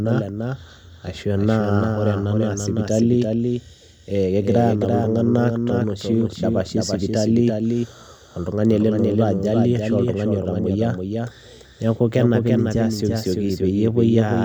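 A doubled audio track runs throughout: a dry copy of the speech trails about 0.3 s behind, somewhat quieter, likely from a slower second capture path.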